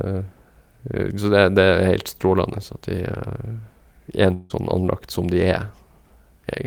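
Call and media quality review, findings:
Speech breaks into a fading buzzy smear from 4.33 to 4.52 s, about 0.18 s, then resumes with a chunk missing, roughly 160 ms of content lost, not delayed. No true silence; the receiver's concealment fills the whole gap by stretching the last sound. Likely component: network transport, a long network dropout where a run of consecutive packets never arrived and the jitter buffer had nothing real to play out.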